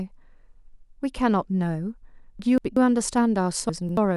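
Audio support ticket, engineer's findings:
Frames out of order, 2.39–2.77 s and 3.69–4.16 s: garbled flutter; adjacent runs of roughly 190 ms and 280 ms swapped before decoding, likely jitter buffer or packet reordering. No time lost. Spectrogram: hard vertical edges, formant tracks jumping backward.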